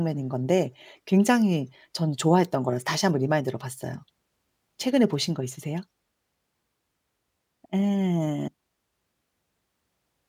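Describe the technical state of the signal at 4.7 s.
At 4.7 s the speech signal is intact, with no audible fault at that moment.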